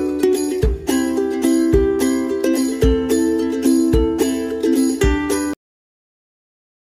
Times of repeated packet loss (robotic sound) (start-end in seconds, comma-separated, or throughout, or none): none